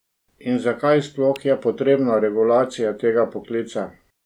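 A speech clip with one sharp snap laid over the voice at 1.36 s, just before "je potrebna regulacija". The snap is extremely short and reaches a peak around -15 dBFS. It is an electrical switching spike, likely from a nearby switch or motor arcing into the audio line. It sits on top of the speech rather than interrupting it, which sets it apart from a dropout or buffer glitch, where the sound itself breaks or goes missing.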